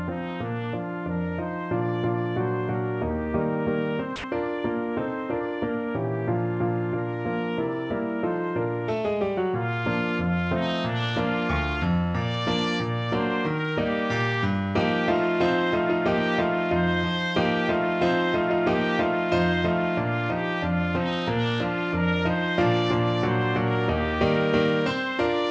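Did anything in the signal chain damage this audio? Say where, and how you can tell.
Yes. The damage comes from call processing at the sending end. From 4.16 to 4.24 s the sound drops out for 80 ms and is replaced by steady, featureless comfort noise, then returns. This is likely sound dropped by the voice detector. It judged that stretch to be background and stopped transmitting, so the receiver filled the gap with synthetic noise. The band-limited call audio, with nothing above 8 kHz, fits a wideband codec such as G.722.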